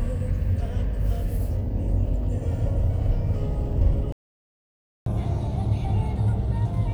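At 4.12 s the sound just drops out and stays silent until 5.06 s, a gap of about 0.94 s. That's a playback stall: the player most likely ran dry of data or had its thread held up, so nothing reached the output. From 5.06 s to the end you get catch-up at higher speed. The player chews through its backlog at 1.25 times normal rate by resampling, so everything runs faster and sits about four semitones sharp.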